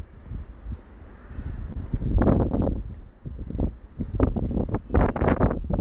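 Clock drift between sender and receiver runs through the whole clip. The sender's clock is about 2% slower than the receiver's. The jitter buffer keeps draining, so the receiver must fill the gap. The everyday sounds drift slightly out of true tempo as a result.

Repeated timing corrections follow from that drift, from 0.03 s to 5.68 s. Playback runs at 98% speed. The receiver repeats small slices of audio to keep pace, adding around a tenth of a second in total. Each edit is tiny. Together they give a faintly stretched tempo.

A short stall from a late packet comes at 1.73 to 1.77 s. A packet arrived late and the buffer ran empty. The receiver held the last sound for 28 ms until it came, then carried on. Nothing is lost, but that moment hangs briefly. The delay grows by 28 ms from there. The sound sits on a call path with nothing above 4 kHz, which fits G.711 mu-law at 64 kbps.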